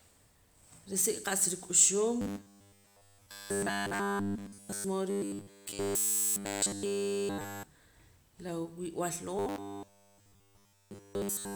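New audio likely arrived too seldom, so playback looped a 10 ms slice in place of skipped material. The result is robotic sound from repeated short buffers, a rigid metallic 100 Hz buzz over the speech from 2.21 to 4.84 s after "risik' qa'sa ruk'uxum", from 5.10 to 7.63 s, and from 9.36 to 11.55 s after "la wib'al".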